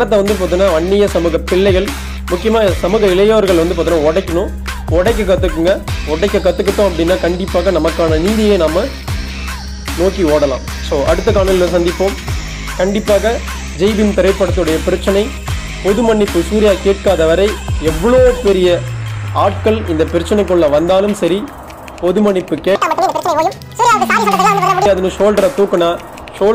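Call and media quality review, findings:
Audio read two samples at a time (double speed), 22.75–24.86 s: runs 2x fast, an octave up. Reader's treating sample pairs as one frame.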